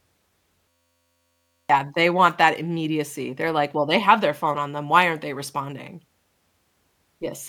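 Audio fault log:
0.69–1.70 s, system hang loop: The computer or audio driver stalled while the output hardware kept replaying the same small buffer, an 11.61 ms slice that fits a 512-sample buffer, around 87 times. A loop that short doesn't stutter. It fuses into a steady buzz pitched at the 86.1 Hz repeat rate and replaces about a second of speech, which picks up again at "they want that immediacy".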